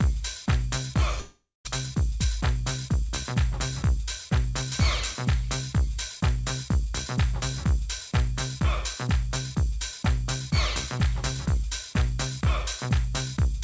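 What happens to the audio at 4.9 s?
Nothing goes wrong at 4.9 s; the audio runs on intact through that moment, carried by the normal call path with its G.722 coding, which leaves nothing above 8 kHz.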